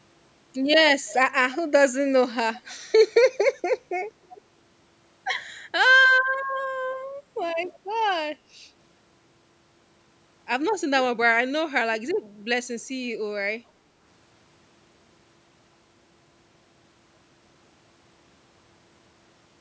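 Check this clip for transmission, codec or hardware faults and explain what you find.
Two brief echo leak events stand out. At 1.06 to 1.16 s and 4.29 to 4.41 s, a faint copy of the speech returns 315 ms late, roughly 20 to 25 dB below the speech. The likely cause is a far-end loudspeaker whose echo canceller let part of the sound back into its microphone. Unlike room reverberation, this is a distinct delayed repeat rather than a smooth decaying tail.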